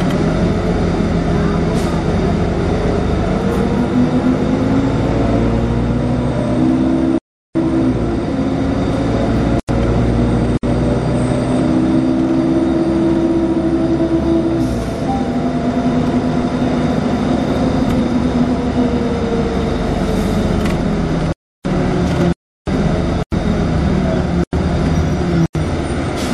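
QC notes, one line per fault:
throughout: MP3 compression. Treble is cut off and quiet detail flickers in and out, giving a watery, swirly texture with smeared attacks and metallic edges on sibilant or bright sounds. The likely cause is low-bitrate MP3 encoding, with the damage pointing to roughly 64 kbps.
6.58 and 18.0: compressed frames skipped. The audio jumps forward abruptly, by about 150 ms at 6.58 and about 300 ms at 18.0. That is around seven and around ten 26.1 ms frames. Overlapping frames blur each join into a short smeared blip rather than a hard click.
7.18–7.55, 9.60–9.69, 10.57–10.63, 21.32–21.65, 22.33–22.67, 23.23–23.32, 24.44–24.53, 25.46–25.55: block of digital silence. The output drops to silence and returns without any fade. The gaps last 372, 93, 58, 325, 346, 93, 93 and 93 ms, which fits output buffers left unfilled. The 93 ms gaps fit a 4096-sample buffer and the 372 ms gap fits 16384 samples.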